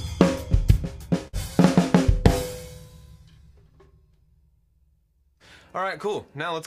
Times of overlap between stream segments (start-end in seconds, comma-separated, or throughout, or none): none